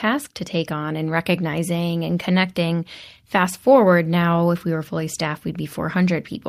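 No technical faults can be heard anywhere in the recording. Nothing in the audio calls for a time or a measurement.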